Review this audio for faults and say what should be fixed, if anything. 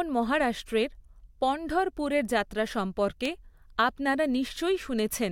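Sharp single-sample word clock ticks of uneven strength recur about every one and a half seconds from 0.23 to 4.77 s, around four in all. The receiver's free-running clock drifts roughly 15 ppm against the sender, slipping a sample at each crossing. Lock the receiving device to the incoming word clock, or use sample-rate conversion at its input.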